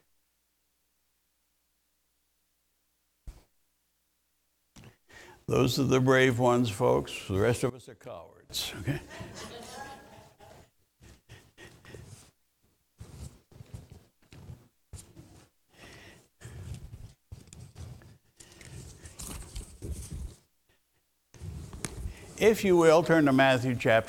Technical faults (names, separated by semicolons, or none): one channel inverted